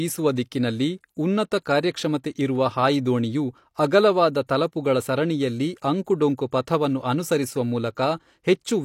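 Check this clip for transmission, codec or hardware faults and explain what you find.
Two brief pre-echo faults occur in the speech. One is at 1.64 to 1.66 s, after "ದಿಕ್ಕಿನಲ್ಲಿ ಉನ್ನತ". The other is at 4.47 to 4.49 s, before "ತಲಪುಗಳ ಸರಣಿಯಲ್ಲಿ ಅಂಕುಡೊಂಕು ಪಥವನ್ನು". The codec's block noise leaks ahead of each attack, adding a short hiss of about 21 to 24 ms and softening the onset.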